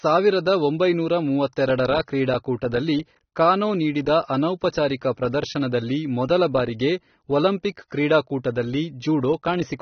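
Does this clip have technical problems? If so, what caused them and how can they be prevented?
Yes. Throughout the speech nothing is heard above 6.3 kHz, and what remains sounds dull and smeared, with warbling, fizzy sibilants. This is likely AAC compression, and it fits AAC-LC at a bitrate near 27 kbps. A simple low-pass filter would remove the top without adding that fizz. Encoding at a higher bitrate, such as 96 kbps or more, would prevent it.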